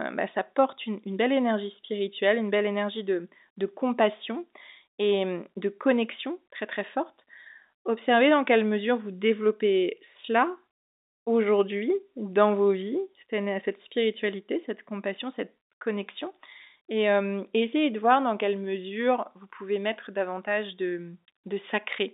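No technical faults can be heard in this speech recording, which has the narrow band of an ordinary telephone line, from 250 Hz to 3.7 kHz, as expected of G.711 telephone coding.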